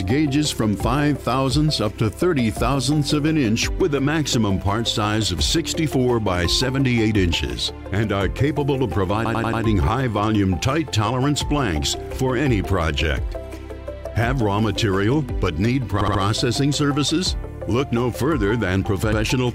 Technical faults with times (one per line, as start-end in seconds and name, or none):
9.24-9.61 repeated frames
16.00-16.21 repeated frames
19.11-19.20 repeated frames